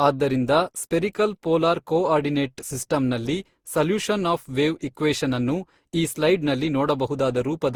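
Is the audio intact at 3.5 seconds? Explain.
No, at 3.5 s the speech carries the generation loss that runs through the whole clip. It sounds swirly, smeared and hollow, with blurred attacks, most likely from around ten lossy passes, fitting Opus at 64 kbit/s, each requantising on a shifted frame grid so the noise piles up.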